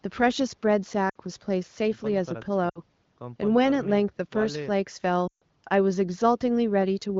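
It's a speech clip, carried over AMR wideband with only light codec colouring, and it has three spots of lost AMR speech frames. At 1.09–1.16 s and 2.69–2.80 s you get short 60 ms dropouts where the decoder reused the last good frame and the sound fell to near silence. At 5.28–5.43 s a longer 140 ms gap drops to near silence within two frames. Radio errors spoiled the frames, so the decoder concealed them with decaying gain. The voice comes back a bit weak afterwards.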